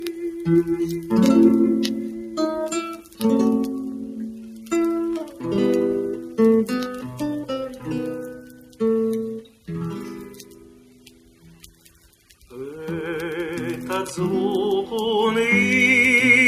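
A noise suppressor built for speech runs across the whole clip. It mistakes steady parts of the sound for noise and pulls them down. Level swings of roughly 10 dB result. Onsets survive, while sustained tones and tails fade, so the audio pumps and thins.

Sound cut by the noise suppressor occurs at 0.0–1.12, 1.92–2.39, 2.75–3.21, 3.91–4.72, 8.29–8.8, 9.43–9.68 and 10.27–12.46 s. Drops reach about 7 to 8 dB. Held material sinks and decays end early. The longest cut lasts around two seconds.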